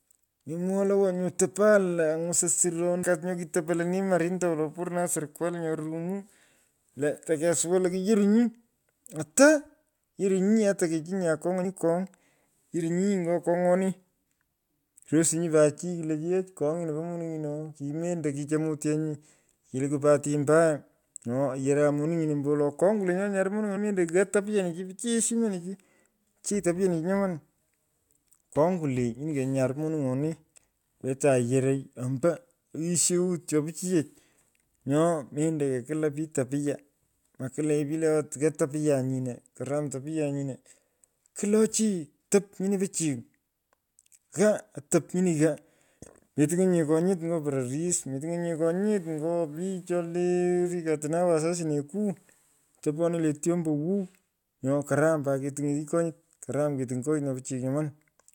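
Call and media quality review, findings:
Damaged data in a compressed stream at 3.02, 11.64 and 23.76 s: the decoder misreads corrupt frames and resyncs to the next header, leaving a brief blip in the speech.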